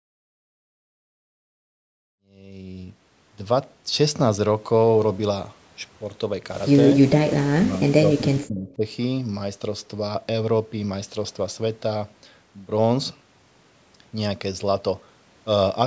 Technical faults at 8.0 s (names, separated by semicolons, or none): speech suppressed in double talk